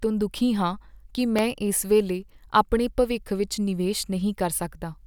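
This speech clip has a repeated buffer at 1.39 s, just after "ਤੋਂ ਦੁਖੀ ਹਾਂ ਕਿ". A tiny chunk of about 1.45 ms, which fits a 64-sample buffer, played twice because fresh audio arrived late, so it comes across as a brief click.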